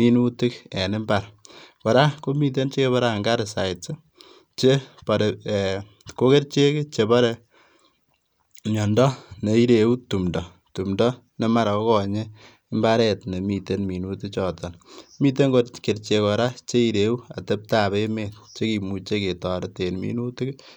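No technical faults are audible.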